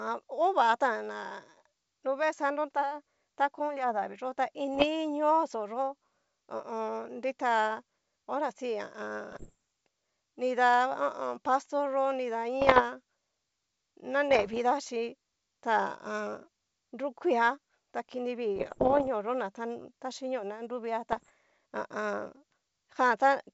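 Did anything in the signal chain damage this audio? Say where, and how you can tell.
Yes. Brief crackling pops and rough, gritty bursts with momentary jumps in level break into the speech at 4.75–4.86 s, 9.32–9.55 s, 12.61–12.83 s, 14.31–14.58 s, 18.56–19.08 s (just after "ta kini") and 21.12–21.31 s. These are bit errors on an ADPCM link. Scattered flipped bits, somewhere around one percent, corrupt the decoder's step size and predictor, so each hit rings on briefly instead of clicking once. The G.722 coding itself sounds clean.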